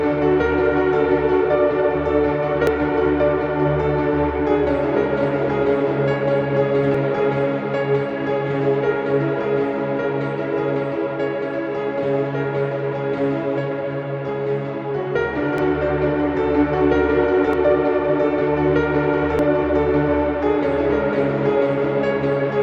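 Damaged data in a compressed stream strikes at 2.67, 6.95, 15.58, 17.53 and 19.39 s. Each time, corrupted bytes make the decoder misread a frame and lose sync while hunting for the next frame header, leaving a brief chirp or blip in the audio.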